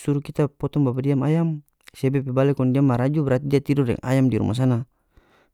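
Two sharp, isolated clicks cut through the speech, one at 3.56 s, right after "kong dia maraju berarti", and another at 4.65 s, just after "tidor deng ayam di". Each shows as a thin vertical line across the spectrum. These are most likely dropped samples: a tiny fraction of a millisecond of the stream went missing, so the waveform leaps abruptly to a later value. The gap is far too short to lose any audible sound.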